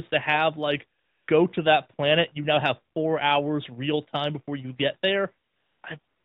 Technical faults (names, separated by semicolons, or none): AMR comfort noise